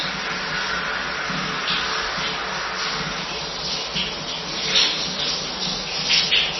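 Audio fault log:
throughout, MP3 compression: The encoder likely ran very short of bits, with heavy damage that fits a bitrate of about 24 kbps. It cut the treble at a fixed point, leaving nothing above 5.9 kHz, and zeroed weak frequency lines that flicker on and off from frame to frame. The sound is dull and muffled, with a watery, swirling texture, metallic chirps where bright detail would sit, and smeared attacks.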